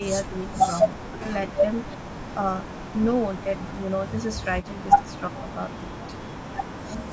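The speech sags and partly vanishes between 0.26 and 0.7 s, falling by about 20 dB, then nearly cuts out from 0.96 to 1.3 s and from 1.96 to 2.08 s, where the drops reach about 40 dB and about 35 dB. This is likely speech suppressed in double talk: with both sides talking at once, the echo canceller could not tell this talker from its loudspeaker echo and turned everything down.

At 4.62 to 4.66 s a brief, faint scrap of the voice returns about 367 ms late, well below the main speech at roughly 30 dB down. That is likely echo leak, where the far end's canceller let part of its loudspeaker pickup through and sent it back.

The same suppression returns at 5.0 to 5.07 s, a dip of about 15 dB, and at 5.29 to 5.46 s, about 20 dB, each briefly pulling the talker down while the other side speaks.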